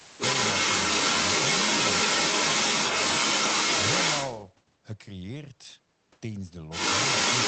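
From 0.0 to 4.42 s a second voice sits under the recording, and it is stronger than the talker's own speech. This is the other side's voice leaking through. The far end was likely playing on a loudspeaker, and the echo canceller left a residue in the microphone signal.

Inside that stretch, from 0.02 to 0.18 s, the talker's speech suddenly dips for roughly a seventh of a second, falling by something like 15 dB before recovering. This is speech suppressed in double talk. With both sides active, the canceller likely could not separate its own talker from the echo and attenuated everything. Unlike a network dropout, the sound ducks in level rather than vanishing or glitching.

From 6.7 s to the end, the same leaking far-end voice returns at a similar strength.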